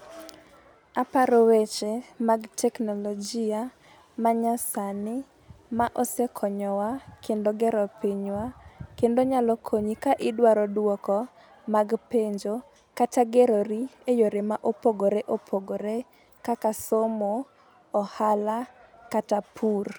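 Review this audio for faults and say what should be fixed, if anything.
No faults can be heard anywhere in the speech. Nothing needs fixing.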